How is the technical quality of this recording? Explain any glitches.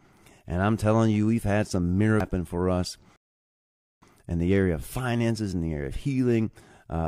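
The recording has two glitches, a CD skip and a rebuffering stall.

At 2.20 s, just after "you we've had some", there is a CD skip. The laser jumped to another turn of the disc's spiral, so playback mutes very briefly and resumes elsewhere, heard as a tick. A waveform shows a hairline gap, and a spectrogram a thin vertical click before "for us in the".

From 3.16 to 4.02 s, after "for us", there is a rebuffering stall. The player ran out of downloaded audio and waited, adding 0.86 s of silence before resuming exactly at "in the area of". A waveform shows a flat line, and a spectrogram a blank band.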